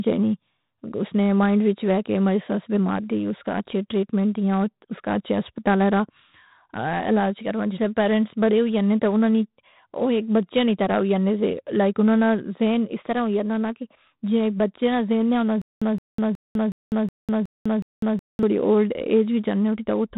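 From start to finish, 4-bit ADPCM compression leaves heavy gritty hiss riding on the speech, with nothing above 3.9 kHz, consistent with roughly 32 kbps coding.

Just after "نہ ذہن نے ہونا", from 15.62 to 18.43 s, a stutter with silent gaps repeats a 168 ms fragment seven times, separated by 200 ms of silence, most likely a stalled stream retrying.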